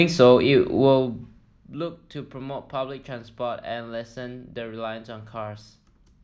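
Nothing in the speech stood out as a technical fault on listening.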